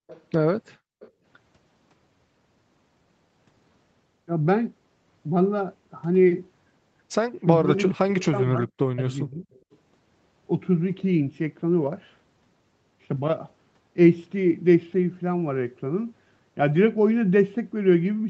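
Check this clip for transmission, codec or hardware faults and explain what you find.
The speech clip has three kinds of echo-canceller fault, all within the first 10 seconds.

Background gated by the echo canceller, 0.00–0.07 s and 0.77–1.23 s: the canceller clamped the microphone, so room sound drops by about 29 and 40 dB. The waveform shows flat gaps and the spectrogram shows blank vertical bands.

Echo leak, 0.07–0.23 s, 1.00–1.11 s and 9.53–9.77 s: a faint copy of the speech returns 420 ms late, about 25 dB below it (about 35 dB at 9.53 s). This is likely residual loudspeaker echo. On a spectrogram it appears as weak, shifted duplicate harmonics.

Speech suppressed in double talk, 7.59–7.71 s, 7.90–8.69 s and 8.89–9.50 s: the speech dips by roughly 20 to 40 dB in pieces, likely because the canceller mistook overlapping talk for echo. The waveform shows chopped, sunken envelope segments.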